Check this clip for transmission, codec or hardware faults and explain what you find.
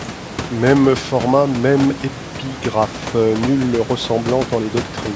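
No transmission, codec or hardware faults.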